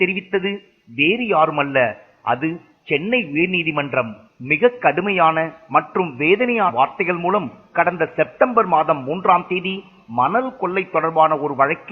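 At 6.64 to 6.71 s the audio jumps forward by around 150 ms: compressed frames skipped, consistent with about three 46.4 ms frames going unplayed.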